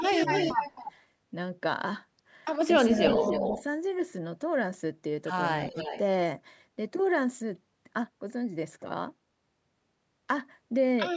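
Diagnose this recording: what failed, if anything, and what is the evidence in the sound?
A delayed double of the speech trails the talker from 0.0 to 0.92 s, 2.93 to 3.63 s and 5.63 to 5.99 s. It lags by 268, 283 and 295 ms and sits roughly 5, 5 and 10 dB below. This is likely an echo leak in call processing, where the far end's echo canceller let loudspeaker pickup return.

Between 3.4 and 3.56 s, while that echo overlaps, the speech briefly sags by about 5 dB for roughly a tenth of a second in all. This is likely speech suppressed in double talk: the canceller could not separate talker from echo and turned both down.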